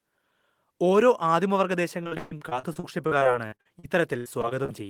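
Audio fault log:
2.03–4.70 s, repeated packet loss (robotic sound): after "ഓരോ ആദിമവർഗ" the speech turns choppy as about twenty dropouts, up to 137 ms each, are patched by stretching the preceding sound.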